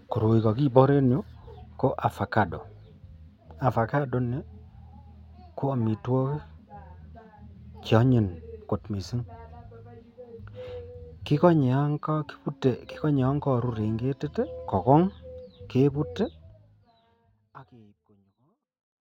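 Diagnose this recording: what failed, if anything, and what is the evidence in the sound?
Nothing stood out on listening to this speech recording, and the smooth fade-out from around 16 s to the end is an ordinary editorial fade rather than a failure.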